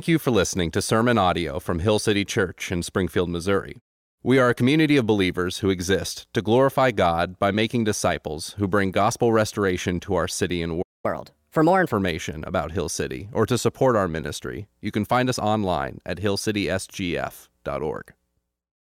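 At 10.82 s the speech stops dead for about 0.22 s, a playback stall, likely the player running short of data or its thread being blocked. Sound returns at 11.06 s.

From 11.06 to 11.92 s comes catch-up at higher speed: the backlog plays at 1.25 times normal rate, so pace and pitch rise together, roughly four semitones, then settle. Unlike a pitch-shift fault, timing speeds up too, and it ends once the lost time is recovered.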